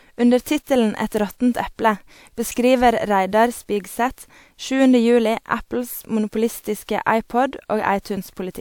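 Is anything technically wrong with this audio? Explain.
Yes. Pre-echo occurs from 0.42 to 0.46 s. A transform codec spread its quantisation noise across a whole block, so noise sized for a sharp attack leaks 43 ms ahead of it. The result is a brief hiss before a softened, smeared onset.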